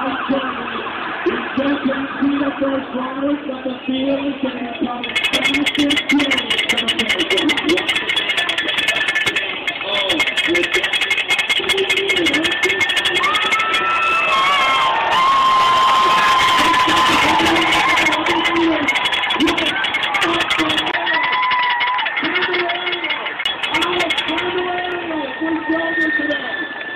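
At 8.95 s and 12.93 s, overlap between stream segments removes a few milliseconds, giving tiny skips that fall on a roughly 4-second segment grid. From 20.91 to 23.46 s, a 20 ms gap precedes duller, boxier sound with nothing above 5.3 kHz and new background noise about 35 dB down at unchanged level, likely an input switched to a poorer device. Another overlap skip follows at 24.92 s.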